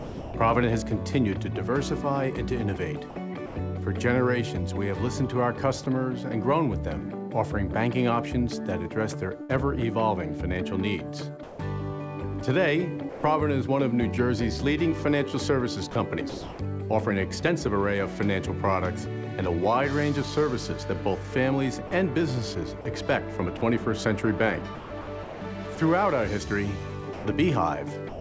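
Sound dropped by the voice detector at 0.00–0.34, 3.46–3.56 and 5.84 s: the audio gives way to steady comfort noise, likely because the sender's detector mistook it for background. Sound chopped by the voice detector over 9.42–13.23, 15.91–16.59 and 21.87–28.20 s: the detector likely kept toggling, so the sound turns choppy as synthetic noise flickers in.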